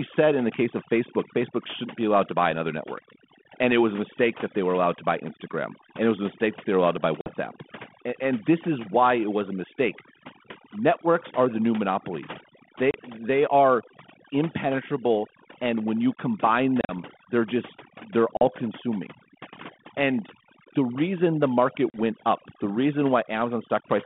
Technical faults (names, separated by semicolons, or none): overdone noise removal; packet loss on an ADPCM call